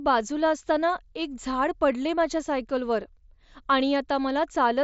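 Nothing to report: the speech comes over a Bluetooth mSBC headset link, topping out around 8 kHz with the faint graininess that path brings.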